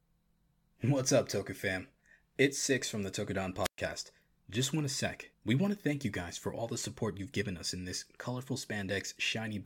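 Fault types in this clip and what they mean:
Wireless microphone squelch dropout: the radio link from an analogue FM microphone fades until the receiver's squelch mutes it, giving a hiss swell then roughly 120 ms of near silence between 3.63 and 3.78 s. The hiss lead-in separates it from a clean digital packet dropout.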